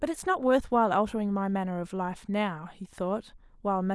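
No faults can be heard anywhere in this recording.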